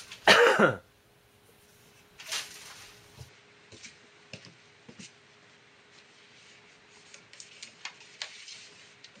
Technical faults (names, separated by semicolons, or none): input switched to a poorer device